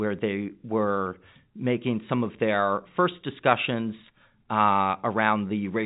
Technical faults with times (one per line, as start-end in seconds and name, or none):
none